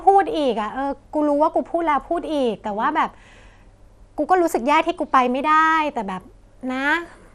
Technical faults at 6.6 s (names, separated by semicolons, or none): MP2 compression